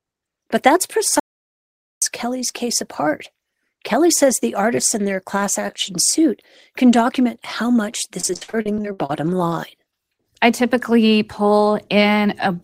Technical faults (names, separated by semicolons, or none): audio dropout to silence; repeated packet loss (robotic sound)